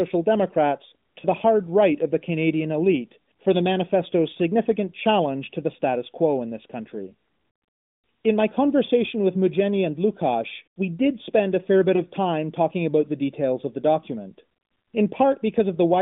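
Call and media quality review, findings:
Lost AMR speech frames, two single-frame events: 1.20–1.26 s, just before "the hard right of"; 11.96–12.03 s, between "spend a fair bit" and "time talking about the". Brief dip or warble, about 20 ms each. The AMR decoder failed checksums and concealed each frame by reusing the last pitch and vocal-tract settings at reduced gain. Spectrogram shows a short smeared, held harmonic patch; waveform shows a narrow amplitude notch. The AMR-NB narrowband path is audible as 150–3600 Hz band-limiting, at 12.2 kbps with light codec damage.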